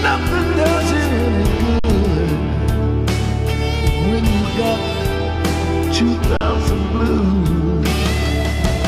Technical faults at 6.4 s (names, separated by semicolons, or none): underrun with held sample